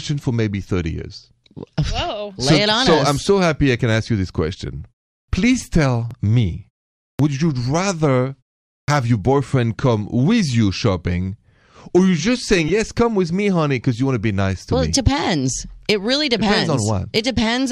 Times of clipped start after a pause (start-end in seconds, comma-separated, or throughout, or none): 5.24-5.28, 7.15-7.19, 8.84-8.88